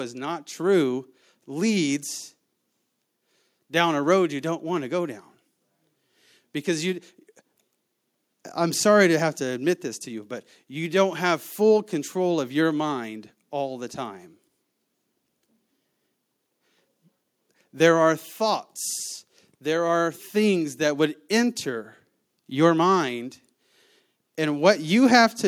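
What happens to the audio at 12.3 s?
Nothing goes wrong at 12.3 s: the speech there plays through intact, with no dropout, click, distortion or other fault.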